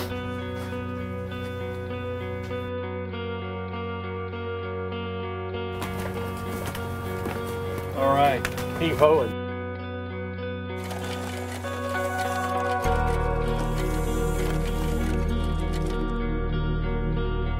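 Nothing is technically wrong with this audio.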